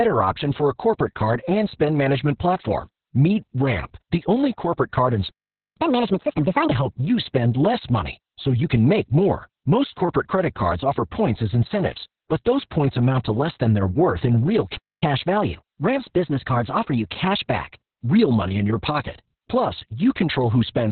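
Throughout, Opus voice compression in its SILK mode cuts everything above 4.3 kHz and coarsely codes the excitation, leaving speech muffled, hoarse and slightly robotic, which fits a bitrate near 6 kbps. From 5.77 to 6.71 s, after "only corporate card and", a catch-up at higher speed plays 1.5 times faster, raising pitch about seven semitones until "help you spend less". At 14.76 s, after "worth in real", a playback stall cuts the sound for 0.26 s, likely because the player ran out of data. A second catch-up then runs from 15.03 to 17.67 s at 1.1 times speed, about one and a half semitones sharp, returning to normal before "real money in your".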